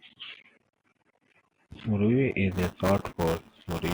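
Buffer tearing begins at 2.51 s and runs to the end of the speech. Writer and reader have slipped within a ring buffer whose period is 5 ms, so roughly a tenth of each chunk replays audio about 10 ms old, leaving a robotic 200 Hz buzz.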